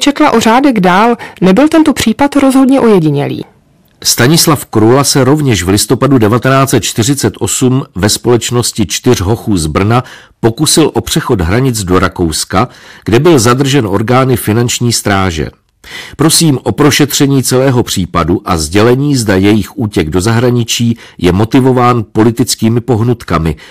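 From the first syllable to the end, the speech runs into hard clipping. It's driven about 12 dB past what the stage can pass, so roughly 7 percent of samples get sliced flat. Those squared-off peaks throw harmonics way up top, giving every loud syllable a harsh, fuzzy edge.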